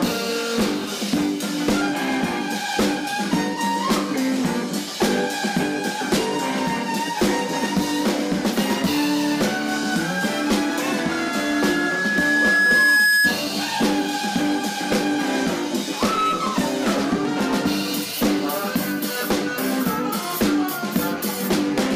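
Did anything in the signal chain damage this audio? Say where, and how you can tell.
Yes. From about 11.01 s a single steady tone near 1.7 kHz rises out of the audio, swelling over roughly two seconds until it sits a few decibels above the rest of the sound, and it stops at 13.4 s. This is loudspeaker feedback squeal, arising acoustically at the capture end rather than in any digital stage. The microphone was picking up a loudspeaker carrying its own signal, and at 1.7 kHz the loop gain exceeded one, so that frequency kept building on itself.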